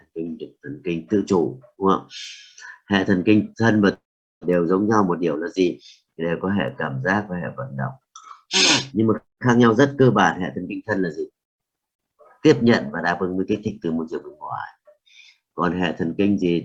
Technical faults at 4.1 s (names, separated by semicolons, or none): long network dropout